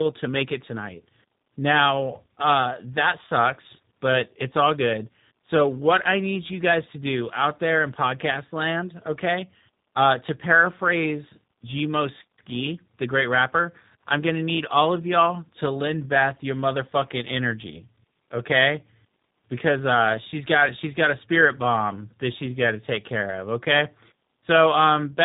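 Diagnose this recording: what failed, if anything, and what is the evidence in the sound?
Tandem speech coding at the codec stage, throughout the speech. Nothing is heard above 3.8 kHz. The sound is rough, muffled and warbly. It points to a CVSD link, then G.711, then a low-rate G.729A coder. That final coder re-encodes speech already degraded by CVSD.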